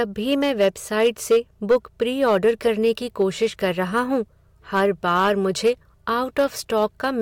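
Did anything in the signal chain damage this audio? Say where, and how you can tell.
Yes. The speech is hard clipped throughout, pushed about 6 dB past full scale at a gain or level stage before or at the converter or a fixed-point format conversion. Only a small fraction of samples, roughly one or two percent, exceed the ceiling, so the peaks of louder syllables are cut flat. The flat-topped peaks spray high harmonics, which is why it sounds crisp and abrupt, unlike the softer, rounded thickening of analogue saturation or a limiter's pumping.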